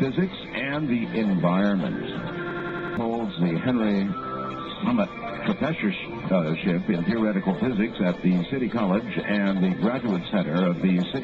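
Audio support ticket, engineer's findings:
System hang loop, 2.51 to 2.97 s. Machine-gun stutter: one ~93 ms slice of sound repeats exactly five times at about 10.8 Hz. Probable component: driver or host froze while the audio hardware kept replaying its ring buffer. Loop length fits a 4096-sample buffer. Roughly half a second of real audio never made it out.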